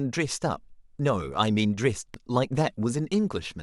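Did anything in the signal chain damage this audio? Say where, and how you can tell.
Yes, a CD skip at the playback stage, around 2.14 s in this speech clip. There's a tick and a near-instant mute, a couple of milliseconds, then the audio picks up somewhere else. That's the laser jumping tracks on the disc's spiral after a knock or flaw.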